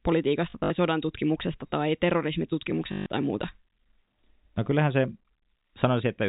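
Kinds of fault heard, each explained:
Packet loss with last packet repeated: missing packets were filled by replaying the previous one, causing robotic stutters with a 50 Hz buzz that fits 20 ms packets, scattered over 0.5–0.7 s before "sodan tutkimuksesta tai" and continuous at 2.92–3.06 s before "tai muuta".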